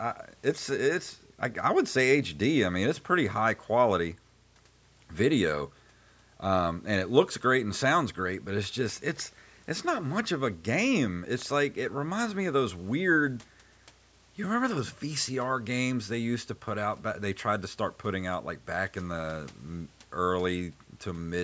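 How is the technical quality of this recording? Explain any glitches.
Nothing stood out on listening to this recording, and there are no glitches to explain.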